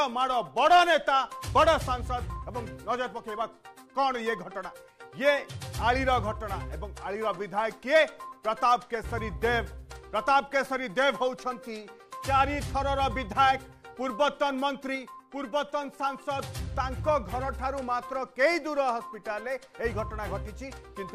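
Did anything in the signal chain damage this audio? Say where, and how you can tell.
Yes. At 14.95 s the whole level, background noise included, drops by about 4 dB in a single step, then snaps back at 16.39 s. That's a sudden gain jump, likely a digital gain setting applied mid-stream without a ramp.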